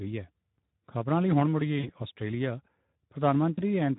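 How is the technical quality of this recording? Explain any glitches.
The recording has clear technical damage: low-rate speech coding throughout and two brief dropouts hidden by the decoder.

Speex codec, throughout the clip: the speech sounds hoarse and noisy, which fits Speex running near 11 kbps. At that rate the CELP coder has too few bits to model the excitation, so plainly audible roughness and grain run through the speech.

VoIP packet loss concealed by the speech codec, at 1.79–1.91 s and 3.55–3.62 s: the decoder replays its last pitch and filter with falling gain, smearing the sound into a fading buzz or coloured noise. The first gap fits about 40 ms of missing audio and the second about 20 ms, and the speech stays weak briefly afterwards.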